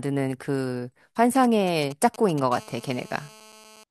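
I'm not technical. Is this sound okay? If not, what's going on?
No. From 1.35 to 2.40 s, a 2G mobile phone near the recording equipment was sending short groups of radio pulses, the way such a phone does while it's setting up a call or message. The audio circuit picked those pulses up and turned them into sound. These are GSM signalling bursts, heard as a galloping dit-dit-dit of brief buzzes laid over the speech.

From 2.52 to 3.84 s, the same kind of phone was in an active call, transmitting pulses steadily about 217 times a second. The equipment picked these up too and turned them into GSM phone buzz: a continuous, hard, raspy buzz at that rate, unrelated to the speech and sitting quieter beneath it than the earlier bursts. Keeping phones away from the recording gear prevents both problems.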